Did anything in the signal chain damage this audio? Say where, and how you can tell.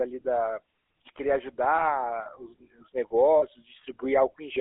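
Yes. The damage sits at the codec stage, across the whole clip. The speech has a constant buzzy, gravelly roughness from the GSM full-rate codec, and it is plainly audible. The coder models the vocal tract and excites it with a sparse, regular pulse train that keeps only one sample in three. That thins and roughens the voice. The band runs only from about 300 Hz to 3.5 kHz, which fits a 13 kbps full-rate coder.

The second fault is lost GSM frames, and it comes from the network, in transit. From 3.38 to 3.43 s, a 40 ms stretch, the sound freezes into a short, rough, metallic ring. The decoder had no good data, so it reused the last good frame's settings. That gap fits two lost 20 ms frames. The loss is short, so the ring ends before it can fade fully to silence.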